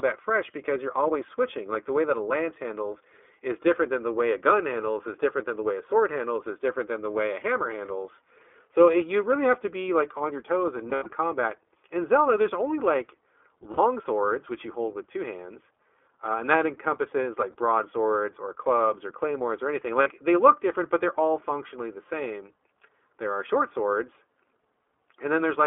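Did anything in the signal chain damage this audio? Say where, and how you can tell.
Yes. At the codec stage, the whole clip is held to a 300 to 3400 Hz band with a rough, synthetic edge. Unlike a plain band-limit, that grain points to iLBC at 20 ms frames.

At the network stage, lost iLBC frames appear at 10.90 to 11.08 s (120 ms scattered, longest run about 70 ms), 13.72 to 13.80 s, 17.52 to 17.55 s and 20.02 to 20.08 s. Concealment holds a buzzy, breathy vowel rather than silence, and speech recovers almost at once.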